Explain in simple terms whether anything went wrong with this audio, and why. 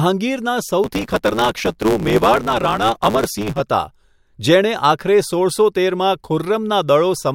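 From 0.83 to 3.61 s the speech takes on a steady buzz, about 109 Hz, and hurries along about 1.16 times too fast. This is a block size mismatch (truncated): one stage hands over chunks, consistent with 512 samples, the next accepts fewer, and each chunk's tail is lost.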